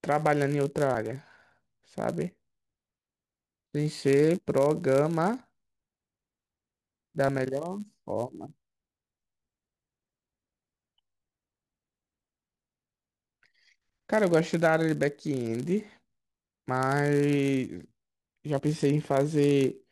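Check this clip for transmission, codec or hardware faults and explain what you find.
Two faults are present in the speech: a constant block-rate buzz and two short forward jumps from missing codec frames.

Filter restarted on every block, throughout: a filter resets each block, adding a tick every 10 ms and producing a 100 Hz buzz. Unlike mains hum, it rises and falls with speech level.

Compressed frames skipped, at 7.27 s and 18.58 to 18.60 s: about one, then two, 21.3 ms frames go unplayed, jumping ahead roughly 20 and 40 ms.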